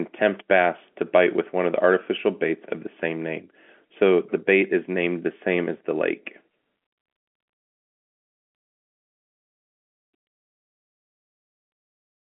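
Nothing stood out on listening to this speech, which carries the narrow, telephone-like band of G.711 coding with no audio above about 3.7 kHz.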